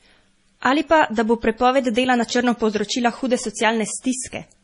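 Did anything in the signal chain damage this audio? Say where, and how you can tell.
Yes, at the codec stage, and it runs through the whole speech clip. Nothing survives above 10.6 kHz, and the s sounds come out swirly and watery with smeared onsets. That's likely MP3 compression starved of bits, zeroing weak frequency lines frame to frame, which fits roughly 32 kbps.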